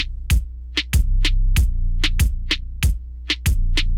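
A steady mains hum runs through the whole clip at 60 Hz, sitting roughly 15 dB below the audio, from a ground loop or nearby transformer. Unlike broadband rumble, it holds one fixed pitch with some harmonics at 120 and 180 Hz.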